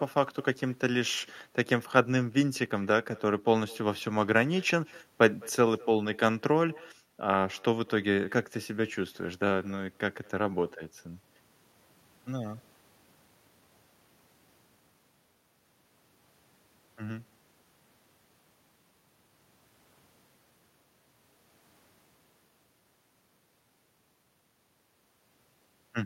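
Every phrase of this speech is trailed, a fifth of a second or so later, by a faint, thin copy of itself, sitting about 27 dB below the voice throughout. That is echo with no canceller: the far end's loudspeaker feeds its microphone, and the call returns uncorrected after the network round trip.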